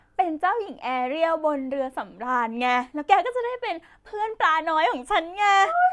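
No dropouts, clicks, distortion or timing errors are audible anywhere in the speech.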